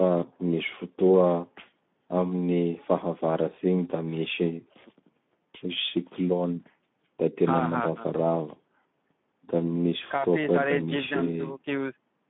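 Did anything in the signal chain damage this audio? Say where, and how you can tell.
Yes, at the codec stage: the whole clip carries plainly audible Speex codec damage. The speech sounds hoarse and noisy throughout, confined to roughly 150 Hz to 3.6 kHz, which fits a narrowband Speex stream near 11 kbps, too few bits to code the excitation cleanly.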